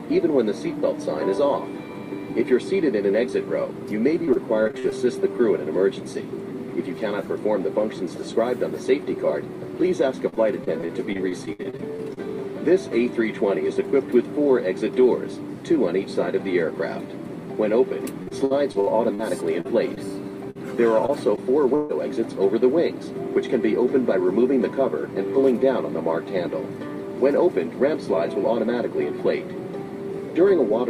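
Repeated packet loss (robotic sound) breaks up the audio at 4.25–4.93 s, 10.29–12.19 s and 18.23–21.91 s. In each stretch the stream keeps dropping short pieces. Every hole is filled by stretching the last sound, so the audio turns choppy, with about 14 to 23 percent of each span patched. The holes run up to 45 ms in the first stretch, 62 ms in the second and 139 ms in the third.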